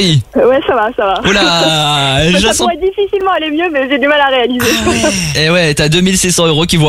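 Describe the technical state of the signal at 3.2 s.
At 3.21 s there's a block of digital silence, a gap of about 4.6 ms where the output dropped to zero and snapped back, so it comes across as a sharp tick.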